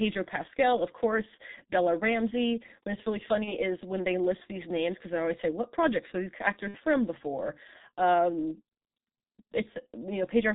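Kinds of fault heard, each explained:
G.723.1 codec: Throughout the speech, the sound is heavily muffled and hoarse. Consonants are smeared, and nothing reaches above 4 kHz. This is a very low-rate telephony coder, and the sound fits its 6.3 kbit/s mode. It processes audio in 30 ms frames and updates its model of the voice slowly, so fine spectral detail and quick transitions are lost.
VoIP packet loss concealed by the speech codec: The speech briefly turns into a fading smear twice. The first is at 3.44–3.53 s, after "it's really" and before "is when they list". The second is at 6.68–6.79 s, just before "from before". In each gap the decoder kept repeating its last pitch and filter at falling gain, and the effect lingers past the gap. The first fits one lost 30 ms frame and the second fits two, about 60 ms.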